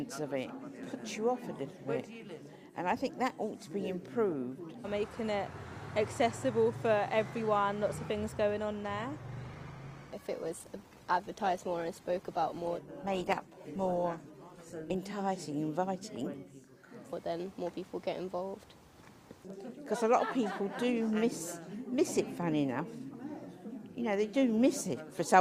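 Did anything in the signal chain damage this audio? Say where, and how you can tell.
Yes. Network stage: from 8.97 to 14.97 s an adaptive stream at a lower bitrate kicks in, with a sudden jump in codec artefacts and no gap, consistent with Opus falling from about 64 to 16 kbit/s.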